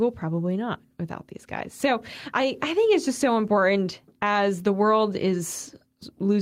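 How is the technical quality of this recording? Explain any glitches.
No glitches or technical problems can be heard here.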